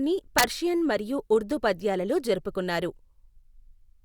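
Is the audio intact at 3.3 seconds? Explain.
Yes, at 3.3 seconds the speech plays through cleanly, with no dropout, click, distortion or other fault to be heard at that moment.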